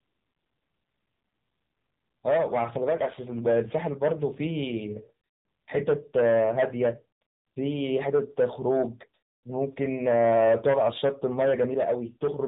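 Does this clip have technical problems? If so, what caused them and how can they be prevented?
Yes. Throughout the clip the speech carries AMR narrowband mobile codec damage, and it is plainly audible: a buzzy, synthetic edge where the codec rebuilds the voice from a vocal-tract model driven by a few pulses per 5 ms subframe. The thinness and buzz fit one of the lower AMR-NB modes, around 7.4 kbps. On a spectrogram, energy stops flat at about 3.8 kHz with nothing above it, and harmonics look smeared and coarse. The waveform shows no breaks. To prevent it, record or transmit with a wideband or full-band codec at a higher bitrate instead of routing the audio through a narrowband mobile call path.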